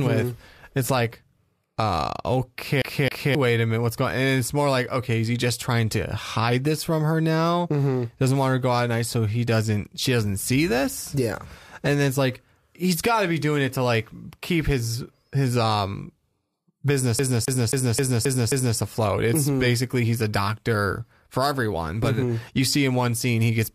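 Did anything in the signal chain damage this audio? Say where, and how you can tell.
Yes. At playback, a CD stuck on one turn. A 0.27 s loop of speech repeats twice at 2.82–3.35 s, before "wait a minute what's", and six times at 17.19–18.78 s. A scratch keeps throwing the laser back.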